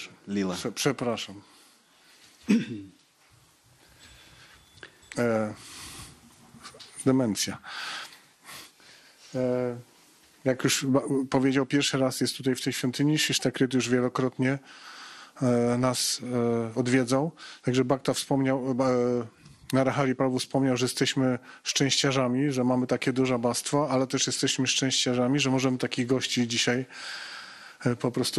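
Throughout, the sound is dull and gurgling, with granular distortion and flickering upper bands, likely MP2 compression starving sub-bands of bits, which fits roughly 80 kbps.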